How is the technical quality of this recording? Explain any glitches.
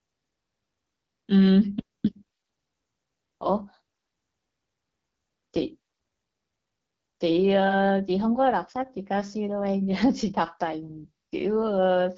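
Technical quality is limited by plainly audible low-rate codec damage across the whole recording. The AMR wideband (HD Voice) codec is at work from start to finish, and the roughness is plainly audible. Nothing is present above about 7.7 kHz. AMR-WB models the speech below 6.4 kHz with a pulse-excited vocal tract filter and fills the band above with shaped noise. The raspy, grainy texture fits one of its lowest modes, around 8.85 kbit/s, where that pulse excitation is too coarse to render the speech cleanly.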